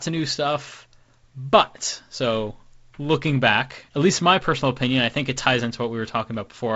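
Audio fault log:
No fault is heard anywhere in the speech. It arrives through G.722 wideband telephone coding at 48 kbit/s, so nothing sits above 7.7 kHz and a faint coding hiss rides along with it.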